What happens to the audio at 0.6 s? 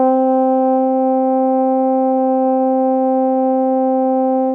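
Nothing goes wrong at 0.6 s: the music plays through that moment intact, with no dropout, click or other fault.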